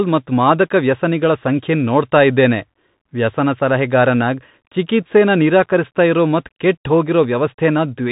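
From start to finish the speech sounds boxed-in and dull, with nothing above about 3.8 kHz, scratchy s sounds, grainy hiss underneath and roughness on loud bright passages: a Bluetooth CVSD headset codec, whose one-bit slope coding, fitting a 64 kbps link, cannot keep up.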